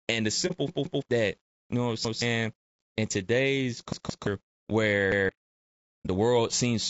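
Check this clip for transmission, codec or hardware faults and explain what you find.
Yes, there's quite a bit going on: a couple of steady coding problems across the whole speech clip, plus several dropouts and stutters.

Low bit depth without dither runs throughout. Quiet passages and word tails turn gritty, with grain that moves with the voice, roughly 50 dB below the signal. It fits about 10-bit resolution rounded without dither, so the rounding error tracks the signal instead of sitting as smooth hiss.

Low-delay AAC compression is also present throughout and plainly audible. The voice sounds rough and grainy, with noise filling between harmonics and a somewhat synthetic top end. That's likely AAC-ELD at around 32 kbps, whose short frames can't resolve pitch harmonics well at that rate.

AAC frame loss with muting shows up at 0.47–0.52 s and 6.03–6.07 s. Each is a brief dip of about 30 ms. 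One frame's spectrum was zeroed, and the overlapping windows fade the sound down and back up around it.

Repeated buffer stutters happen at 0.68–1.02 s (just before "that you know what"), 2.05–2.22 s (right after "you know what I'm"), 3.93–4.27 s (right after "in today's"), and 5.12–5.29 s. A 170.67 ms chunk replays with hard joins, twice in the first and third, once in the others, which fits an 8192-sample buffer starving.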